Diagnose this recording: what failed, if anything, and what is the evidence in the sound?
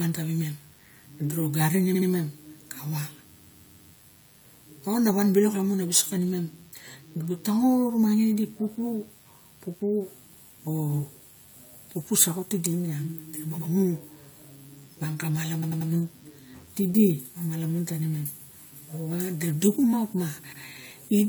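Analogue stage: DECT cordless phone buzz runs throughout. A faint, thin 100 Hz buzz with harmonics sits under the speech. A nearby DECT unit bursts every 10 ms, and the circuitry rectifies it.

Codec or storage stage: repeated frames. Stutters start at 1.94, 3.36, 15.62 and 20.52 s. Each replays a block of 70 to 139 ms. Duplicated frames lengthen the audio.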